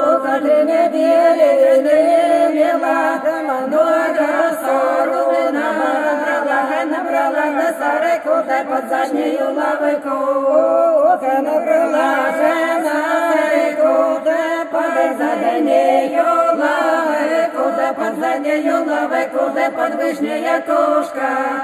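Throughout, channel delay (comb filtering): one channel lags by a fraction of a millisecond, so mono summing notches near 5 kHz, sounding hollow or phasey. Spectrograms show fixed dark bands.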